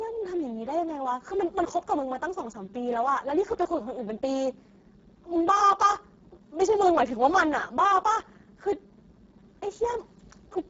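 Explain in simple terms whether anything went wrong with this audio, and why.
From start to finish, the speech was squeezed through the Speex codec, an old voice-chat compressor, at a very low quality setting. With too little data for the voice's raw buzz, it sounds hoarse, noisy and robotic, and nothing remains above 7.7 kHz.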